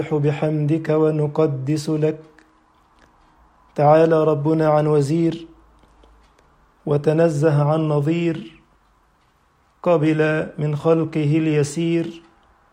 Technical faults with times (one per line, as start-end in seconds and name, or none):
none